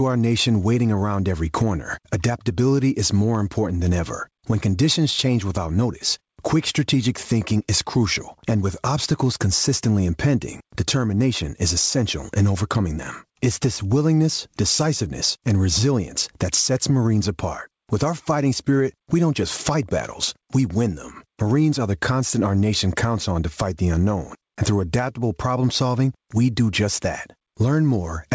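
Throughout the speech, the level surges and sags with every loud syllable. This is gain pumping. The gain is pushed down by roughly 15 dB on every loud sound, so quiet and loud passages sit unnaturally close together and everything sounds squashed. The likely cause is input gain set far too high, with a fast limiter or compressor clamping each peak. The band stops at 8 kHz, consistent with a G.722 call codec.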